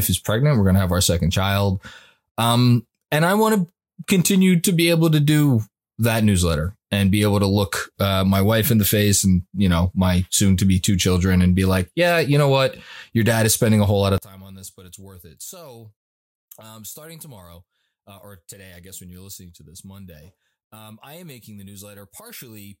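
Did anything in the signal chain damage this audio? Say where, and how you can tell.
Yes: one channel inverted, likely a polarity flip in analogue wiring. From 14.18 s the mono sum cancels, dropping the speech by about 23 dB. The waveform shrinks and the spectrogram dims across the band.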